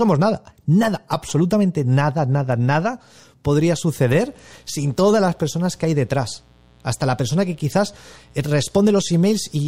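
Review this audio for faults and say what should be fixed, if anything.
From 4.07 s, right after "nada nada nada podría", a mains buzz kicks in and runs to the end: a raspy 60 Hz hum, about 35 dB under the speech. Switching spikes twice per mains cycle spray harmonics up into the kilohertz range. Keep dimmers and unshielded cables away from the signal path.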